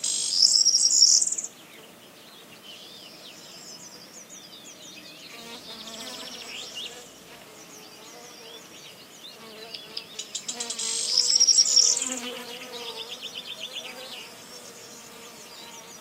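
From 12.87 s to the end at 16.01 s, the quality abruptly drops, with more obvious codec artefacts and no gap at the switch. This is an adaptive stream at a lower bitrate, consistent with a drop from roughly 64 to 32 kbit/s Opus after the connection slowed.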